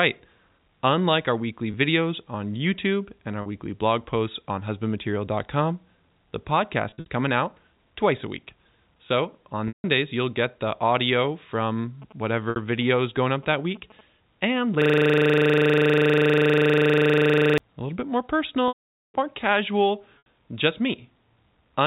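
Speech carried over a telephone-band G.711 path, so a spectrogram shows nothing above 4 kHz. The clip has three kinds of fault.

Packet loss with pitch repetition occurs at 1.72 s (20 ms), at 3.42 s (40 ms, between "and our" and "weekly blog posts on"), at 6.90–7.06 s (120 ms scattered over 160 ms), at 9.68–9.84 s (160 ms), at 12.50 s (60 ms), at 18.68–19.14 s (460 ms, after "a little bit more" and before "more casual just") and at 20.18–20.25 s (80 ms, after "more casual"). The receiver bridged the missing audio by repeating the last pitch cycle, so short gaps sound like a held buzzy note. The longer ones fade to silence. On a spectrogram the harmonics freeze into flat horizontal lines, then darken away.

GSM signalling bursts from a nearby 2G phone are heard from 12.02 to 14.01 s. They form a galloping ticking buzz at about 217 Hz, roughly 25 dB below the speech, as the circuit rectified the radio pulses. 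They appear as grouped vertical stripes with a comb of 217 Hz harmonics.

A system hang loop runs from 14.82 to 17.58 s. A frozen computer or driver left the hardware cycling a 40 ms buffer, giving a machine-gun stutter at 25 Hz. The waveform shows identical 40 ms blocks repeated end to end.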